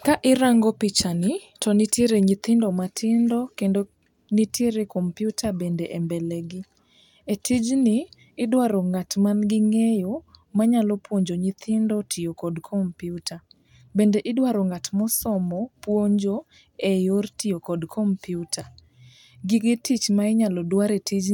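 No technical faults can be heard anywhere in the speech. Nothing in the recording calls for comment on that score.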